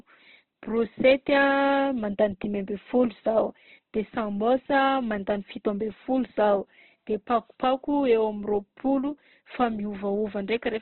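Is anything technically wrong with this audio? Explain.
Yes. Heavy Opus compression, most likely, runs through the whole clip. The encoder appears to have stayed in its CELT mode. At a bitrate that sounds to be around 12 kbps it cannot code each band properly, so it keeps band energy and fills in the detail with folded copies of lower bands or with noise. The speech comes out rough and grainy, with a noisy texture in place of clean harmonics. The bandwidth is narrowed to nothing above 4.3 kHz, which leaves the sound dull.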